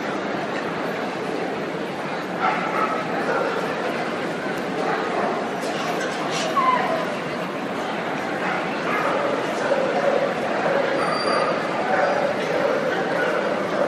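No technical faults can be heard anywhere in the audio; the signal stays continuous and intact throughout.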